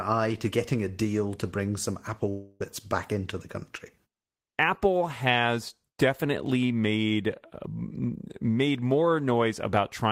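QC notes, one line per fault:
2.29–2.62 s, long network dropout: the speech stops and is replaced by a smeared continuation of the last sound, a buzz-like tail that carries on for about 0.31 s. It never falls to silence. When the speech resumes, roughly 0.3 s of it is simply gone, so the flow jumps ahead. The likely cause is a stretch of lost packets, with the receiver filling the gap by extending the last audio it had.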